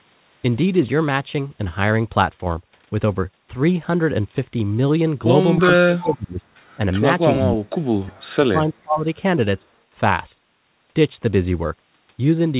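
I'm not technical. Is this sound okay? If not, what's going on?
No. The speech drops away three times: from 5.6 to 6.45 s, 7.37 to 7.78 s, and 8.03 to 9.06 s. This is likely speech suppressed in double talk, where the call turned this voice down while the other side was talking too.

Around 5.96 to 6.13 s, a faint second copy of the voice comes back about a third of a second late. That is likely an echo leak from a loudspeaker on the other end.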